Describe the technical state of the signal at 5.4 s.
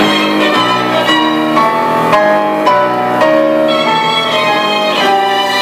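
At 5.4 s the signal is hard clipped, as it is across the whole clip. The level was driven about 6 dB past what the stage could pass, so the peaks are sliced flat at the ceiling. Only a small share of samples, under one percent, exceed that limit, so the damage sits on the loudest peaks. The squared-off tops add high harmonics, heard as a brief crackle or rasp whenever a peak hits the ceiling.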